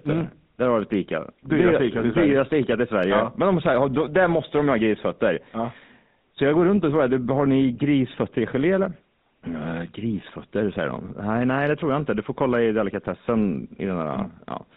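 Throughout, the speech sounds buzzy and gravelly with nothing above 4 kHz: GSM full-rate codec damage, from a coarse pulse-driven vocal-tract model fitting a 13 kbps stream.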